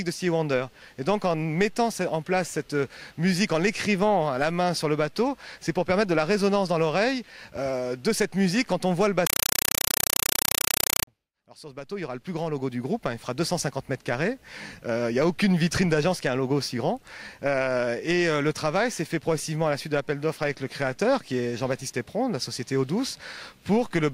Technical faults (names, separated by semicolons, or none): compressed stream played as audio